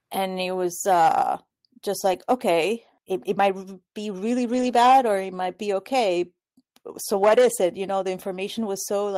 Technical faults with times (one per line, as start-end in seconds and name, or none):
1.99-2.17 lost packet rebuilt from error correction
4.53-4.67 lost packet rebuilt from error correction
7.21-7.47 lost packet rebuilt from error correction